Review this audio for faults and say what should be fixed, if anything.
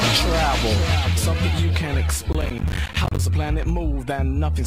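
From 2.33 s to 3.19 s the audio breaks into a burst of processor overload crackle, a gritty tearing laid over the sound for nearly a second. The processing could not keep up, and a long run of buffers, around thirty, missed their deadlines. Each one dropped to silence with hard edges. The spacing of the clicks points to buffers of roughly 10 ms. To prevent it, reduce the processing load or enlarge the buffer so each block has more time to complete.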